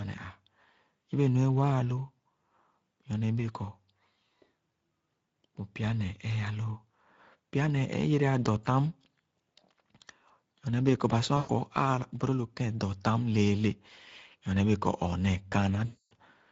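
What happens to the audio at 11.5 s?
VoIP packet loss concealed by the speech codec, from 11.37 to 11.57 s: about 120 ms of packets went missing, which fits six lost 20 ms frames. The decoder stretched its last pitch and filter at falling gain, giving a stretched, fading sound. Throughout, the Speex codec at 16.8 kbps also leaves plainly audible damage on the speech.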